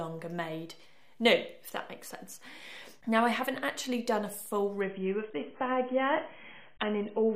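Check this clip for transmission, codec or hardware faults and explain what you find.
One transmission fault: an adaptive stream at a lower bitrate from 4.81 s to the end. The connection evidently slowed, so the player switched without a gap to a much leaner encoding, consistent with a drop from roughly 96 to 16 kbit/s AAC. Nothing above 3.8 kHz survives, so the sound turns abruptly dull and muffled, with coarser codec artefacts.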